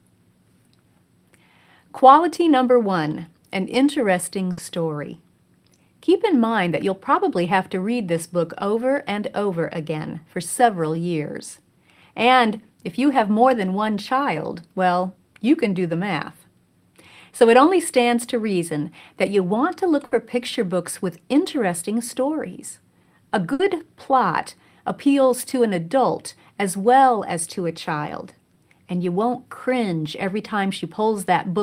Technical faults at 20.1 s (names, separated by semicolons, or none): burst of packet loss